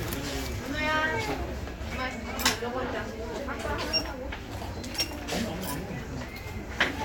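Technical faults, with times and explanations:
Listening through the recording, nothing stood out as a technical problem at any point.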